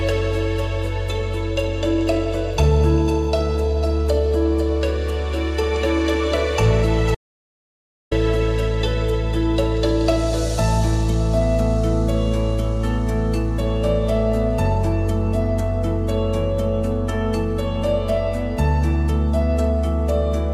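From 7.15 s to 8.11 s the sound cuts off abruptly and the track falls to silence, with no room tone or background underneath, before the audio resumes mid-flow. This is an audio dropout to silence lasting just under one second, about 965 ms of lost material. The likely cause is that the input signal disappeared for that stretch while the recorder kept writing silence, so whatever occurred during the gap is simply missing.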